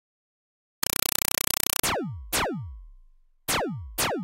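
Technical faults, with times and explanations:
0.83–1.83 s, compressed stream played as audio: for one second the sound is replaced by loud, chattering static, because a compressed data stream was sent as if it were ordinary samples instead of being decoded. Each 4 ms burst of noise is followed by silent padding, repeating 31.25 times a second, which fits an AC-3 stream. On a waveform this is a regular train of dense blocks with flat gaps; a spectrogram shows full-band vertical stripes at that rate.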